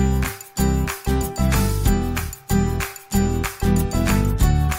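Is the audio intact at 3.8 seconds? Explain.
Yes, the audio is intact at 3.8 seconds, with no dropout, click, distortion or other fault audible at that moment.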